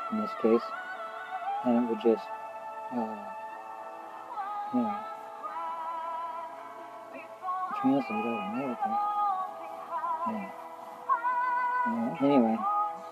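No dropouts, clicks, distortion, level jumps or timing slips are audible anywhere in the recording.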